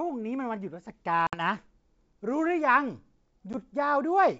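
Packet loss on an ADPCM call at 1.27 s and 3.53 s: silent gaps of about 60 ms (several packets) and 10 ms (a single packet). The decoder's predictor and step size then lag the sender's, so the speech resumes with brief distortion.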